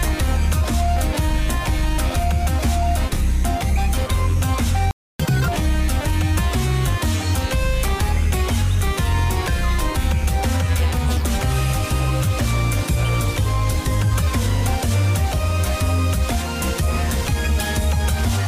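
At 4.91 s the player likely ran out of data or was blocked, a playback stall that leaves about 285 ms of silence in mid-flow until 5.20 s. Catch-up at higher speed follows: the player resamples its backlog at 2× speed until 5.48 s, so the sound rushes by with pitch raised roughly ten semitones before settling back.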